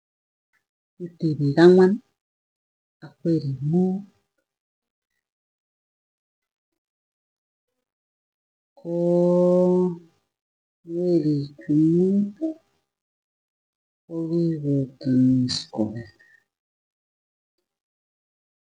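A time-stretched section runs from 3.73 s to the end of this speech clip, starting right after "ak werik": the pace drops abruptly to about 0.52 times normal speed with pitch unchanged, so "tipik angwan kikopa korik" drags, likely from stretching software repeating short slices to lengthen the audio.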